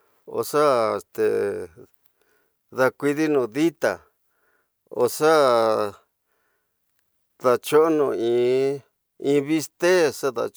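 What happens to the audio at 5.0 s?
At 5.01 s, a bit error spike: a flipped bit jolts a few samples to about -24 dBFS, producing one sharp tick, a lone waveform needle, and a thin broadband spectrogram stripe.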